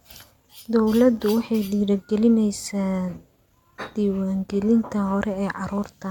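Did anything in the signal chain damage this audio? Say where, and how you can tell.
No, nothing in this signal chain damaged the audio.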